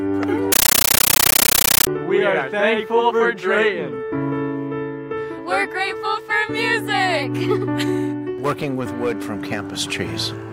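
A compressed stream played as audio runs from 0.52 to 1.87 s. An AC-3 (Dolby Digital) bitstream on the digital link was treated as ordinary PCM samples instead of being decoded, which fits a 640 kbps stream. Each coded frame comes out as a 13.3 ms burst of noise followed by zero padding, repeating 31.25 times a second. For that stretch the sound itself is gone, replaced by very loud, harsh, chattering static.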